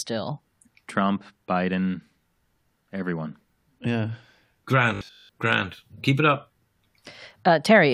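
From 4.95 to 5.29 s the speech collapses into a rigid, metallic drone at about 50 Hz: robotic sound from repeated short buffers. The likely cause is new audio arriving too slowly, so the same short slice is replayed again and again while fresh audio is skipped. A 50 Hz buzz fits a 20 ms repeat. Unlike a dropout or stutter, there is no silence or audible restart. The steady imposed pitch covers most of the stretch and still loosely tracks the speech.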